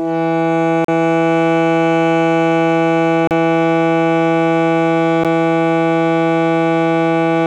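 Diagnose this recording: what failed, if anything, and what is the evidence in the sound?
Music cuts out at 0.85–0.88 s and 3.27–3.31 s, with a tick or dip at 5.24 s. These are blocks of digital silence from buffer underruns; the shortest fits a 512-sample buffer.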